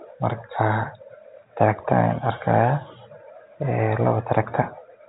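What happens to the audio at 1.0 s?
Nothing goes wrong at 1.0 s: the speech carries on intact, with only the narrow telephone band of G.711 coding, which leaves nothing above about 3.8 kHz.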